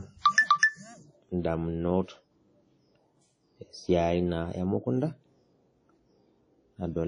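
A speech recording, likely passed through WMA compression at a low bitrate, something like 32 kbps, across its whole length. The transform coding leaves plainly audible ringing and washy smearing, hiss that swells with the speech, and nothing above 10.1 kHz.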